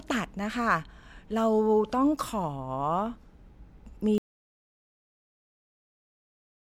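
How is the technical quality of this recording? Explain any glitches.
The recording has one clear glitch. An audio dropout to silence begins at 4.18 s and continues to the end: the speech cuts off mid-flow into silence with no room tone, likely because the input was lost while the recorder kept writing silence.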